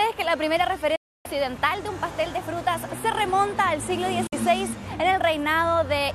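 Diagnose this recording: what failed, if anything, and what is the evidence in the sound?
A digital broadcast dropout at the reception and decoding stage. The sound fades out over about 8 ms and is silent from 0.95 to 1.26 s and 4.27 to 4.33 s, showing a flat waveform and blank full-band spectrogram gaps. The receiver muted on bad frames, and both gaps fit whole 24 ms frames.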